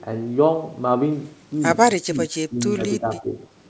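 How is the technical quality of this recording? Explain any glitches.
Two glitches affect the speech, both speech suppressed in double talk. From 2.08 to 2.57 s and from 3.0 to 3.36 s, the echo canceller likely couldn't separate the near talker from loudspeaker echo while both sides spoke, so it turned everything down. The voice dips in patches of about a fifth of a second each, by about 20 dB, then about 15 dB. The audio's top end stops at 8 kHz, which fits a G.722 wideband call path.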